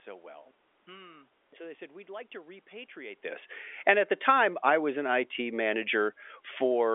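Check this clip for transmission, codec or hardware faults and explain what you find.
No transmission, codec or hardware faults are audible.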